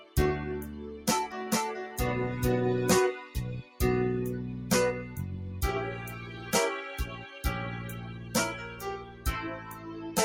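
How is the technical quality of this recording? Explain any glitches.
The recording has clear technical problems. A speech noise suppressor is processing non-speech sound, and a short stretch is doubled.

A noise suppressor applied to music or sounds runs through the whole clip. It treats steady tones and tails as noise and pushes them down. Level swings by about 10 dB. Attacks survive, but held sound pumps and thins.

Several passages show sound cut by the noise suppressor. They occur at 0.0–0.16 s, 0.83–1.07 s, 3.62–3.79 s, 6.16–6.51 s, 7.12–7.37 s, 8.06–8.34 s, 8.67–9.25 s and 9.58–10.1 s. The suppressor mistakes sustained sound for noise. Drops reach about 5 to 11 dB, so decays sink early.

A doubled audio track appears from 1.32 to 2.98 s. A second full-band copy trails roughly 0.4 s behind at nearly equal level. It has no added room colour, and it starts and stops abruptly. The likely cause is a slower second capture path or a misaligned edit.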